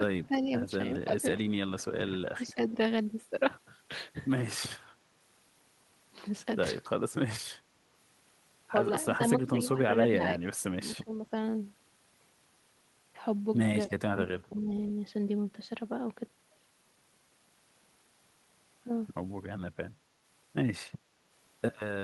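The voice dips in patches at 0.26–0.5 s, 1.03–2.76 s, 9.04–10.41 s, 10.82–11.32 s, 13.89–13.94 s and 14.5–14.69 s. At worst it drops by roughly 15 dB, and only slightly in the brief 13.89 s dip. This is likely speech suppressed in double talk: with both sides talking at once, the echo canceller turned this talker down along with the echo.

At 14.72–14.92 s, a faint, delayed copy of the voice follows 278 ms behind the original, about 25 dB below the speech. This is likely an echo leak, where loudspeaker sound picked up at the other end got past that side's echo canceller and was sent back.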